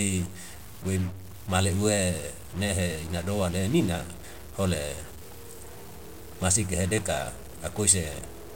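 Grainy noise rides on the speech from start to finish, and the pauses between phrases fill with a gritty noise instead of falling silent. The likely cause is a stuck bit: one data bit held at a fixed value, shifting many samples by a step of about -40 dBFS.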